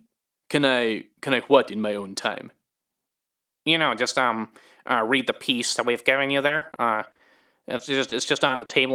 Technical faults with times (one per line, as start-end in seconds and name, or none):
6.47-7.21 repeated packet loss (robotic sound)
7.77-8.71 repeated packet loss (robotic sound)